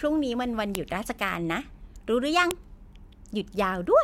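At 0.75 s and again at 2.51 s a sharp, loud snap cuts across the speech: a file header played as audio. Separate WAV pieces were joined without stripping their headers, so a few dozen bytes of header data are read as samples at each join. Unlike an ordinary splice click or a dropout, the snap is abrupt and loud regardless of what the speech is doing, and no audio goes missing around it.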